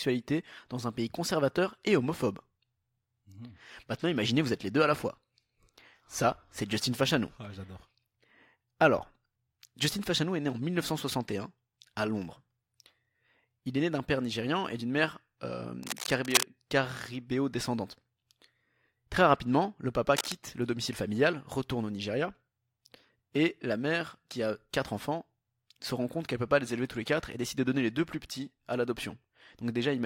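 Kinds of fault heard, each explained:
cable scratch noise: Dense, irregular crackling and rustling sits over the speech from 15.83 to 16.43 s at roughly the speech level, and again more briefly from 20.16 to 20.32 s, somewhat quieter, likely from a worn cable or connector shifting its contact.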